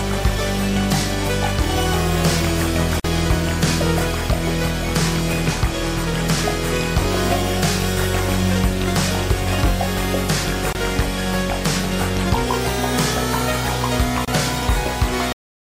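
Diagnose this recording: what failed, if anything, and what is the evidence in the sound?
The failure is at the codec and storage stage: the recording was encoded in separate pieces and joined without trimming each run's start-up delay and end padding. The result is a gap at the join of encoded pieces, heard three times: a 47 ms gap at 3.00 s, 24 ms at 10.73 s and 28 ms at 14.25 s. Each one opens abruptly inside continuous sound, with edges smeared by the codec, before the audio resumes exactly where it stopped.

The second failure is in storage or playback: the final buffers were never written or played out, leaving a cut-off end. At 15.33 s the sound stops mid-event and drops straight to digital silence, with no decay or natural tail. The silence lasts for the remaining fraction of a second, which shows the file ends before the sound did.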